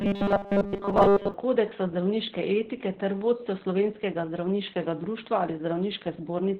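From the very start, the speech has heavy Opus voice compression. Nothing comes through above about 4 kHz, so it's squeezed into narrowband, and the coarse excitation coding leaves it muffled, hoarse and a little robotic. That combination points to the SILK voice coder running at a very low rate, something around 8 kbps with 20 ms frames, where it gives up the upper band and most of the fine detail.

Right at the top, from about 0.01 s to 1.34 s, there's robotic sound from repeated short buffers on top of that. The speech turns into a stiff metallic buzz at 200 Hz that still roughly follows the talking. The likely cause is new audio arriving too late, with the player looping the last 5 ms chunk to fill the gap. Most of that stretch is repeats rather than real audio, and the loop length fixes the pitch.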